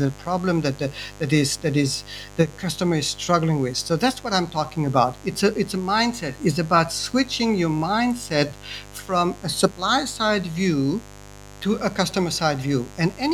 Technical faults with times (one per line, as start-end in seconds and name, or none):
0.00-13.33 mains buzz